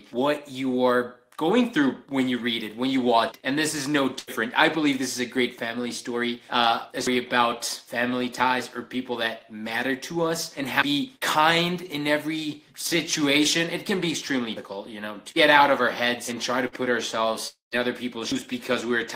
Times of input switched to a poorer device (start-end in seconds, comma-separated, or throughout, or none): none